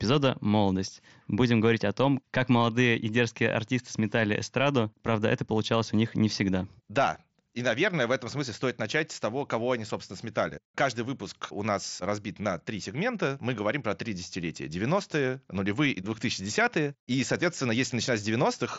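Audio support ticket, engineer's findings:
Findings: no fault found in the speech, which comes through the Bluetooth mSBC headset path with content up to about 7.7 kHz.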